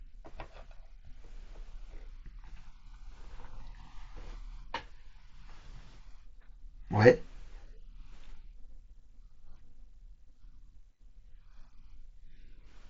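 No technical faults can be heard in this speech.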